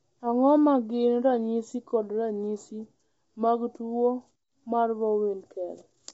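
Throughout, the speech sounds plainly rough and grainy, with nothing above 7.8 kHz. This is likely low-delay AAC compression (AAC-ELD), fitting a bitrate of about 24 kbps.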